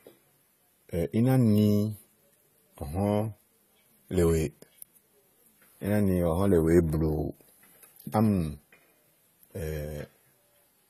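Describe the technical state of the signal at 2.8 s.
AAC compression damage is present at 2.8 s, as it is throughout the speech. The audio stops dead above 14 kHz, sounds dull and smeared, and has a fizzy, warbling edge on sibilants, likely from coarse AAC-LC quantisation at a low bitrate near 32 kbps.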